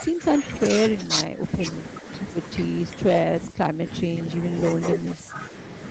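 The speech dips at 1.07 to 1.42 s, 3.47 to 3.87 s, 4.03 to 4.16 s and 5.16 to 5.37 s, falling by up to around 15 dB. This is likely speech suppressed in double talk, where an echo canceller mistook overlapping talk for echo and turned it down.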